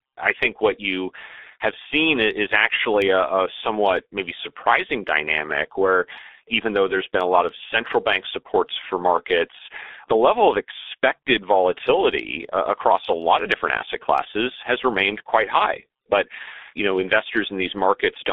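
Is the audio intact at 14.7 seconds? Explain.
No. At 14.7 seconds, as throughout the clip, the speech carries heavy G.723.1 codec damage. The band is confined to about 250 Hz to 3.6 kHz, and the slowly updated voice model leaves it muffled and hoarse with smeared consonants, consistent with a 6.3 kbit/s stream.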